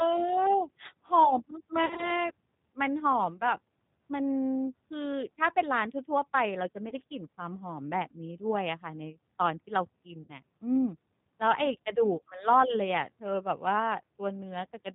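Throughout the speech, the band stops at 4 kHz and voicing has a rough, slightly synthetic grain, consistent with the G.729 codec at 8 kbit/s. Its 10 ms frames are rebuilt from a vocal tract filter, pitch predictor and sparse pulses, so the damage is plainly audible.

VoIP packet loss concealed by the speech codec occurs at 1.86–2.12 s, 6.89–6.94 s and 10.23–10.32 s. The decoder stretches its last pitch and filter into a buzzy tone or coloured noise that fades. The first gap sounds like about 70 ms of scattered dropouts, and the speech stays weak or distorted briefly afterwards.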